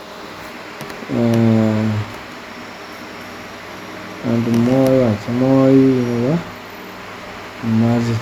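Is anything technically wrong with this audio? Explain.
No, the speech signal shows no technical faults anywhere in the recording.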